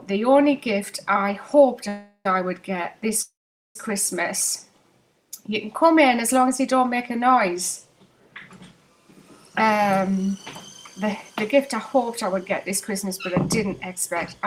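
The sound stalls into a fading buzz at 1.88–2.26 s and again at 3.22–3.76 s, mostly silence there. These are call audio freezes, likely from delayed packets draining the jitter buffer. The audio then resumes intact. Later it runs faster at unchanged pitch, audibly hurried at about 9% faster from 9.62 to 10.36 s, and 3% faster from 11.54 to 14.46 s. This is jitter buffer speed-up, trimming pitch-period slices totalling roughly a tenth of a second or less per stretch.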